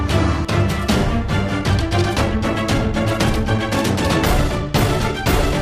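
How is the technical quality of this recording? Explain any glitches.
A sped-up, time-stretched section disrupts the recording. From 1.57 s to the end at 5.61 s, the pace jumps to about 1.55 times normal while pitch stays unchanged, likely because software squeezed this stretch by dropping short slices, leaving the sound rushed.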